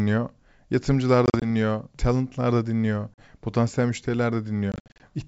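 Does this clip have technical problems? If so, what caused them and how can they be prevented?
Yes. Packet loss on an ADPCM call causes hard-edged silent gaps. They occur at 1.26–1.46 s, before "talentlar da dinliyor potansiyel", at 3.14–3.24 s, after "talentlar da dinliyor", and at 4.72–5.02 s. After each gap the decoder's predictor and step size are out of step with the sender's, so the speech returns slightly distorted. Adding jitter buffering and packet loss concealment would prevent it.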